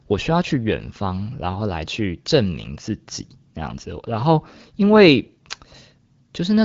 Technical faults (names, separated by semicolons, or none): none